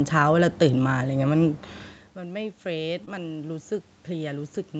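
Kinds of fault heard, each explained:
Automatic gain rising: After the level drops about 18 dB near 2.15 s, the gain control slowly raises its gain. Voice and room noise swell together until the end.
Short concealed packet loss: Around 3.05 to 3.20 s, about 20 ms never arrived and was filled by stretching the preceding sound, leaving a brief smear before normal audio resumes.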